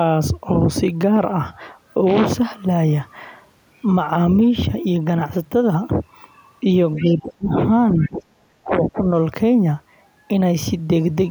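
Around 6.95 to 7.13 s you get the other side's voice leaking through: a faint second talker, roughly 20 dB under the main speech. It's likely a loudspeaker echo the canceller didn't fully remove. Right on top of that, from 6.98 to 7.58 s, there's speech suppressed in double talk. The talker dips by up to about 25 dB, most likely because the canceller couldn't tell them apart from the echo and turned everything down. It happens again at 7.97 to 8.26 s, where the dip is about 20 dB, and that stretch carries another faint leak at 8.0 to 8.1 s, around 25 dB down. Two short dropouts follow at 8.62 to 8.73 s and 8.91 to 9.0 s, each about 20 to 25 dB deep.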